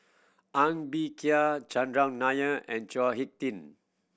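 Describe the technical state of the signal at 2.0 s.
At 2.0 s the speech signal is intact, with no technical fault present.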